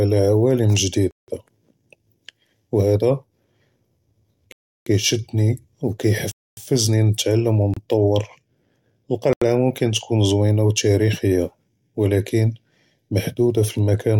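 Blocks of digital silence cut this speech clip at 1.11–1.28, 4.52–4.86, 6.32–6.57, 7.74–7.77 and 9.33–9.42 s, lasting about 29 to 341 ms. Output buffers likely went unfilled, with some gaps fitting 4096- to 16384-sample blocks, so the audio drops to silence abruptly.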